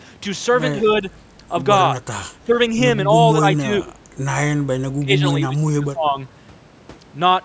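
Speech suppressed in double talk, likely, dips the talker at 0.81, 1.94, 2.42, 3.05, 3.55, 4.95 and 5.48 to 6.18 s: level ducks, deepest near 5 s, rather than clean gaps like packet loss.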